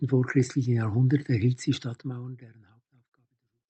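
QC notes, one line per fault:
0.09–2.46 s, automatic gain rising: the level climbs steadily by about 4 dB over roughly 2.4 seconds, and the speech and the background beneath it swell together. An automatic gain control judged the input too quiet and raised its gain gradually rather than in a step, so no edge is heard, only a slow lift of everything at once. The call-path coding stops the top end near 8 kHz.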